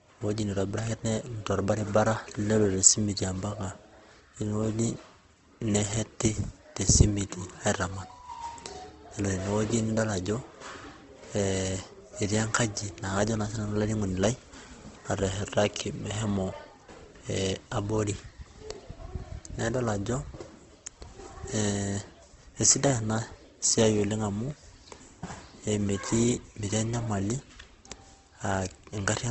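Throughout, the speech sounds rough, grainy and somewhat dulled, with a narrowed top end. The likely cause is Opus compression at a low rate, consistent with about 16 kbps.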